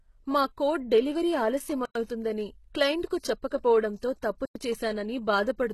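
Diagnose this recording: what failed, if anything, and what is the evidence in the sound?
At the codec stage, the recording likely went through HE-AAC compression at a very low bitrate, on the order of 16 kbps. The speech carries heavy codec damage throughout, with nothing above 12.3 kHz. Only the lower band is truly coded. The treble is synthesised by spectral band replication, which copies lower content upward under a coarse envelope, so the upper harmonics do not line up with those below the crossover.

At the storage or playback stage, the audio was handled in chunks about 2.5 s long, and silence was inserted at the joins. This produces a gap between chunks of 100 ms at 1.85 to 1.95 s and again at 4.45 to 4.55 s. No material is missing, but the speech stops dead for a tenth of a second at each join.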